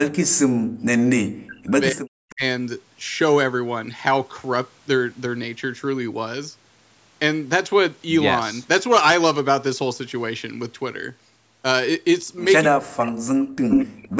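Speech suppressed in double talk, 0.0 to 2.43 s, 12.68 to 13.35 s and 13.81 to 14.17 s: the sound repeatedly dips deeply, by around 40 dB, and breaks into pieces, likely because an echo canceller could not tell this talker from loudspeaker echo while both sides spoke and attenuated everything.

Echo leak, 2.3 to 2.34 s and 13.69 to 13.86 s: brief delayed copies of the sound return, the first 255 ms late and faint, the second 312 ms late and slightly louder than the speech, likely loudspeaker pickup the far end's canceller failed to remove.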